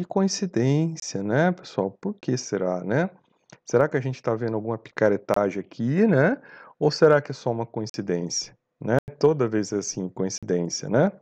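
Speech clip with six blocks of digital silence, hard dropouts with no fade: 23 ms gaps at 1.0 s (just before "né pessoal"), 2.21 s (before "será né") and 5.34 s, 46 ms at 7.9 s (after "que é só uma") and 10.38 s, and 93 ms at 8.99 s. The doubling lengths fit 1024-sample buffers at 44.1 kHz going unfilled.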